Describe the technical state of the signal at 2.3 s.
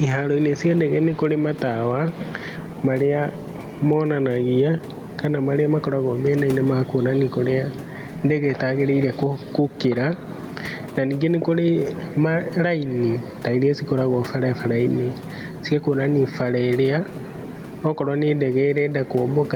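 At 2.3 s the speech shows gain pumping, present throughout. Level swings around 10 dB, likely from excessive gain and a fast limiter ducking each loud sound.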